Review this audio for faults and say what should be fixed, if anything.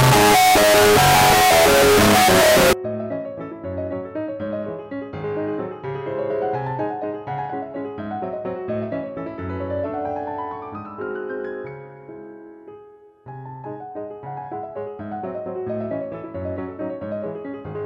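From 0.00 to 2.73 s the audio is very loud, harsh distortion with quiet parts as loud as the rest, likely signed and unsigned mixed up, consistent with 16-bit samples. Declare the sample format explicitly at every read and write stage so signedness is never inferred.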